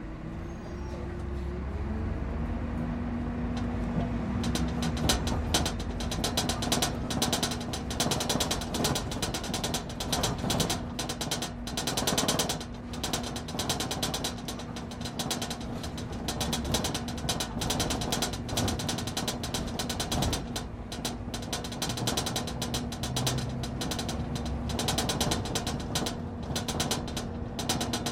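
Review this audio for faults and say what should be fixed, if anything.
At 21.89 s there is a single instant of damaged data in a compressed stream, heard as a brief blip in the sound. A stretch of the encoded bytes at that point is corrupt, so the decoder cannot read those frames correctly, loses its place in the stream and has to hunt for the next valid frame header before normal playback resumes. To fix it, re-source or re-transfer the file from an intact copy. To prevent it, verify file integrity with checksums after every copy or transfer and use a container with error detection.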